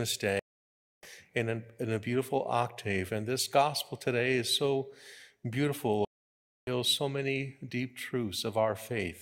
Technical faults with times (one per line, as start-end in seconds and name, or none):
0.39-1.08 stream reconnect
6.05-6.70 stream reconnect